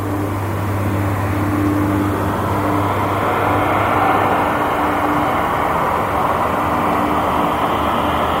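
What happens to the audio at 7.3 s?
Nothing goes wrong at 7.3 s; the sound carries on intact through that moment, with no dropout, click or distortion.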